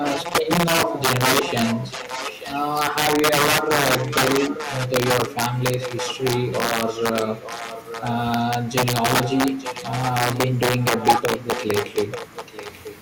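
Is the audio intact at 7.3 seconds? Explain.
No. At 7.3 s the speech carries two faults. The integer overflow runs through the whole clip: the signal is driven about 8 dB past full scale, and a small share of the samples go over the limit. Instead of being held at the ceiling, those samples wrap around to the opposite extreme. Each overloaded peak therefore jumps across the entire range, producing sharp, violent cracks on loud syllables that are far harsher than ordinary clipping.

An echo leak covers 5.80 to 8.13 s. A second copy of the speech arrives about 0.89 s late and sits roughly 10 dB below the direct sound. This is likely a far-end loudspeaker whose sound reached its microphone and slipped past an echo canceller that failed to remove it, so the audio was sent back down the call.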